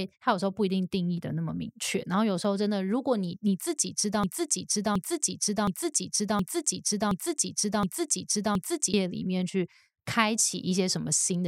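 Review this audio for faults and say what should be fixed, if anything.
A broken-record loop runs from 4.24 s to 8.94 s. A fragment about 0.72 s long repeats exactly, back to back, seven times. The speech that belonged in those 4.7 seconds never plays. The cause is likely a stall in the player, encoder or stream, which kept resending the last piece it held instead of fresh audio. This section needs to be recovered from a clean source or cut. To prevent it, monitor the stream for stalls and flush the buffer rather than repeating stale data.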